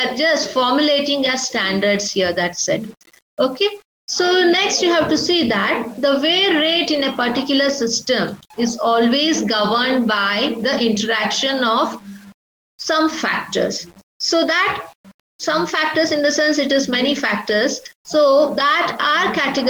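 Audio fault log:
throughout low bit depth without dither: grainy distortion that tracks the signal about 35 dB down, likely from rounding to 7 bits; unlike steady hiss, it drops away in silence.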